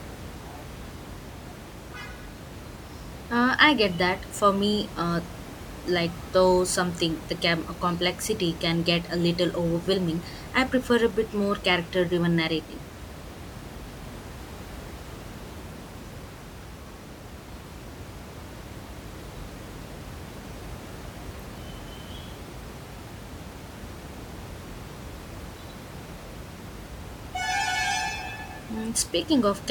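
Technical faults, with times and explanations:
No technical faults are audible anywhere in this speech.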